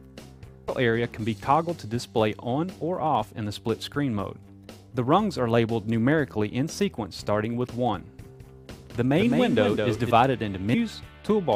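Damaged data in a compressed stream shows up at 0.68 s and again from 10.73 to 10.75 s. At each point the decoder hit corrupted bytes, misread the frame, lost sync and hunted for the next valid frame header, so the audio is briefly disrupted. A doubled audio track runs from 8.21 to 10.11 s, where a second full-band copy of the same audio trails the original by around a fifth of a second at about 5 dB lower. It has no reverberant tail or room colouring and switches on and off abruptly, so it sounds like a flat slapback rather than an echo. The likely cause is the signal being captured a second time through a slower path and mixed back in.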